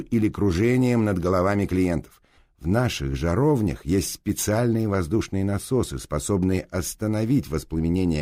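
Two unsynchronised clocks, likely drifting apart by about 500 ppm, cause clock slip clicks from 0.11 to 8.18 s: single-sample slips roughly every 0.04 s, heard as a steady soft rattle.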